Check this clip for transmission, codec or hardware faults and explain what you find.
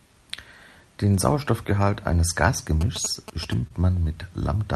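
Two faults are audible in this speech clip, both in its second half, over a call path whose audio stops at around 12 kHz.

GSM signalling bursts, 2.81 to 3.54 s: a nearby 2G phone was exchanging short signalling bursts, and the audio circuitry rectified that radio energy. The result is a galloping dit-dit-dit of brief 217 Hz buzzes, sitting roughly 10 dB below the speech.

Short concealed packet loss, 3.67 to 3.72 s: about 20 ms of audio arrived too late for the decoder, which covered the gap with 25 ms of synthesised continuation before blending back into the real signal. It is heard as a brief smear or wobble just after the buzzing ends.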